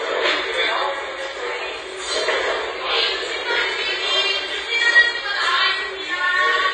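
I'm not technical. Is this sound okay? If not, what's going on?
No. The whole clip sounds dull and smeared, with nothing above about 9.6 kHz, likely from heavy AAC compression squeezing the file too hard.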